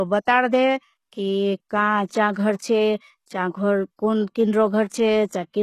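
Throughout the speech, sibilants sound gritty and metallic, and nothing is present above 12.3 kHz. This is likely HE-AAC compression at a low bitrate around 16 kbps. Spectral band replication rebuilds the treble from copied lower bands, so it stays bright but its harmonics misalign, unlike a dull low-pass cut.

Pre-echo occurs from 2.05 to 2.10 s, between "बतार दे कि काँ" and "चा घ़र छे चा", and again from 4.87 to 4.92 s. A short hiss of 50 ms, then 46 ms, precedes each sharp onset and softens it. The codec's block-wide quantisation noise lands before the attack, whereas reverb trails after one.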